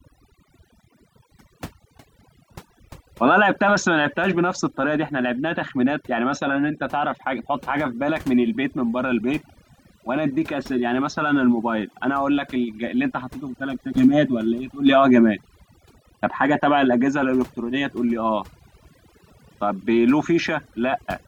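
From start to finish, the gaps between phrases sink to near silence speckled with twinkling artefacts. This is overdone noise removal. A noise reduction stage was pushed too hard, so any frequency band that came close to its noise estimate was pulled far down or shut off. That stripped out the background noise and also the quieter parts of the voice, leaving bands that blink on and off.

At 13.96 s there is a brief rough smear, about 10 ms long, where the tone of the voice turns momentarily noisy. This is lost LE Audio frames, and its length fits a single dropped frame. With no data arriving for that moment, the LC3 decoder filled the gap by reusing the previous spectrum with randomised signs. That keeps the overall level but scrambles the fine structure of the sound.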